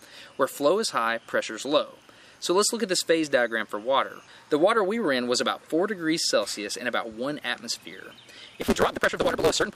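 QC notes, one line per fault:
8.61–9.76 s, block size mismatch (truncated): A steady 172 Hz buzz appears, and the sound runs about 1.88 times fast at near-normal pitch. The tail of each block is being discarded, and the buzz rate fits a 256-sample read.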